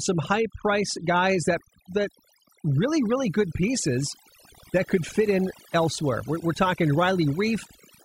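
Overdone noise removal runs through the whole clip. A noise reduction stage set too aggressively pushes individual frequency bands down or off wherever they approach its noise estimate, taking quiet voice detail with them, so the background drops and breaks up into twinkling specks.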